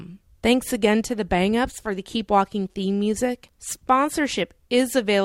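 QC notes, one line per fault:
No technical faults are audible anywhere in this speech recording.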